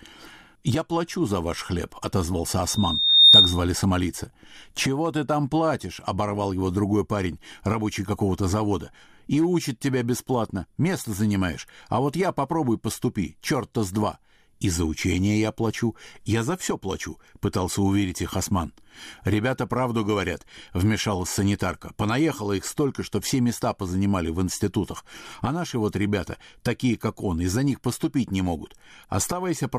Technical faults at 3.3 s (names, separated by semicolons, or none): loudspeaker feedback squeal